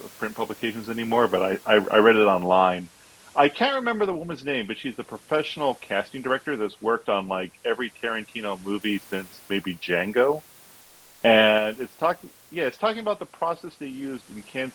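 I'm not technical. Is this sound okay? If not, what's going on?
No. From 10.81 to 11.21 s there is comfort noise in place of the background. The real room sound is briefly swapped for a smooth, plain hiss, slightly quieter, likely because the call software paused sending during a gap. Unlike a dropout, it never goes silent.

At 11.58 s the microphone volume is stepped down. Speech and background both drop in one sudden step and stay lower, likely the call software turning the input down automatically. A gradual fade would slide; this jumps.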